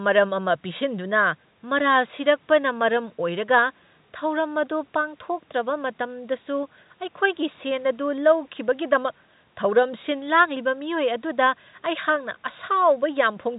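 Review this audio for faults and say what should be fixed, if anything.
Nothing here needs fixing; no faults are audible.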